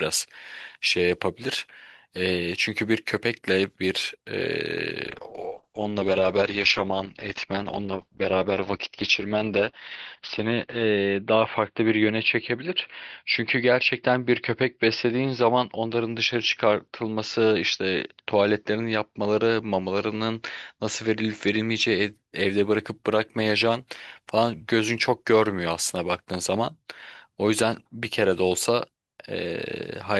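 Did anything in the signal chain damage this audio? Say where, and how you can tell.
Yes: a call bitrate drop at the codec from 5.07 to 22.19 s muffles the speech, top end cut near 6 kHz, consistent with 32 kbps falling to 8 kbps.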